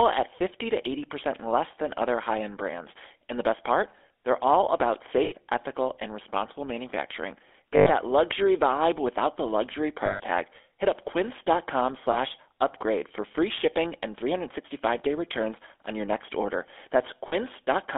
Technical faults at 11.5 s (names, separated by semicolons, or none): GSM full-rate codec